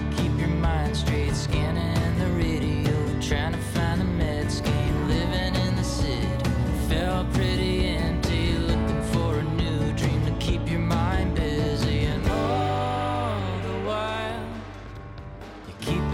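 Nothing in the audio stood out as a technical fault on listening.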